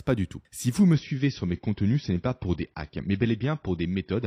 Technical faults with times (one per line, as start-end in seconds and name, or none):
0.93-4.26 adaptive stream at a lower bitrate